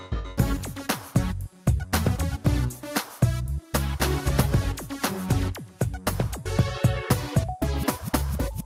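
Nothing technically wrong can be heard in this audio.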